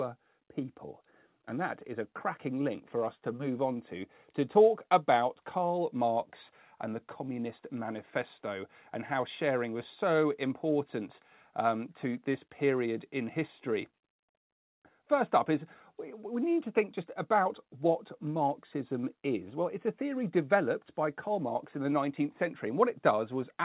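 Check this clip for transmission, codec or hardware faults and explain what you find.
No transmission, codec or hardware faults are present here.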